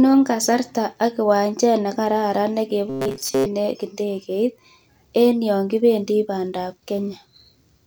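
A speech recording turns into a rigid, metallic buzz from 2.90 to 3.46 s, pinned at 134 Hz while loosely tracking the talking. This robotic sound from repeated short buffers likely comes from audio arriving too seldom, with a segment of about 7.5 ms looped through most of that stretch.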